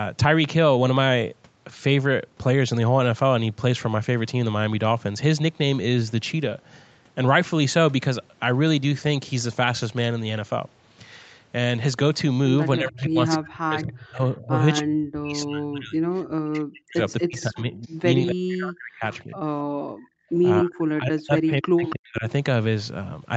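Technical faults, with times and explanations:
12.78–16.05 s, 16.43–19.39 s and 20.62–22.24 s, speech suppressed in double talk: the talker's level repeatedly collapses, at worst by around 40 dB. Most likely the echo canceller, facing both sides talking at once, could not tell near speech from loudspeaker echo and attenuated everything.
12.99–13.35 s, 14.76–14.81 s, 17.10–17.87 s and 21.86–21.94 s, echo leak: delayed copies of the speech trail it by 276 ms, about 10 to 30 dB below it, the 17.1 s stretch being weakest. Likely residual loudspeaker pickup the canceller failed to remove was sent back.
19.67–20.32 s, background gated by the echo canceller: the room sound drops by about 40 dB and then returns. While the loudspeaker was playing, the canceller clamped the microphone down hard, briefly erasing the ambient noise floor until it released.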